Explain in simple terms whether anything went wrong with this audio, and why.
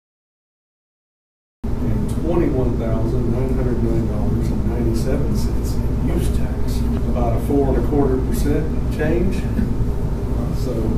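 Something did go wrong at the very beginning: a cut-off start. For the first 1.64 seconds there is nothing but digital silence, and then the sound appears abruptly at 1.64 s, already in progress rather than building up naturally. This happens when recording or streaming begins late. The opening portion was never captured, so the audio jumps straight into the middle of a sound with no natural attack or fade-in.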